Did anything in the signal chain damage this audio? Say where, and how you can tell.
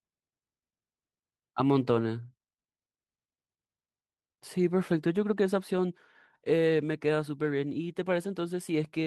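No, nothing in this speech stood out on listening as damage from any stage of the signal chain.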